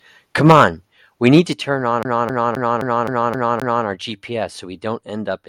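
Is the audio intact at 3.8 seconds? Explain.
No. At 3.8 s the playback is still inside a CD stuck on one turn, which runs from 2.03 to 3.86 s. A scratch keeps returning the laser to the same point on each disc rotation, so a 0.26 s slice of the speech repeats seven times, each pass cut off by a brief mute at the jump. The result is a rapid, evenly spaced stutter, close to four repeats per second, that only releases at 3.86 s.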